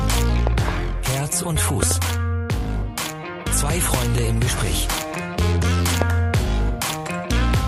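The audio is marked by loud pops, sharp thumps that stand roughly 15 dB above the surrounding sound, which carries on beneath them. Pairs of pops fall at 0.47–0.71 s, 1.83–1.93 s and 3.94–4.20 s, and a single pop at 6.02–6.04 s. The likely cause is voltage steps from a plug, a switch or static. On a waveform each pop appears as a tall spike, and on a spectrogram as a thin vertical broadband stripe.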